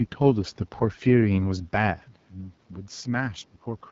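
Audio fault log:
Throughout: AMR wideband (HD Voice) codec. The speech has a plainly rough, raspy texture, consistent with one of the codec's two lowest rates, most likely the 8.85 kbit/s mode. At that rate the pulse-based vocal tract model has too few bits to track the excitation cleanly, so voiced sounds turn buzzy and grainy. Nothing is present above 7.6 kHz, and the top band above 6.4 kHz is synthetic shaped noise rather than real detail.
3.5 to 3.67 s: speech suppressed in double talk. Within this window the speech level drops sharply, falling roughly 20 dB at its deepest, with the affected portions adding up to around a tenth of a second. The likely cause is an echo canceller that could not tell the near talker from loudspeaker echo while both sides were active, so it attenuated the near-end signal along with the echo.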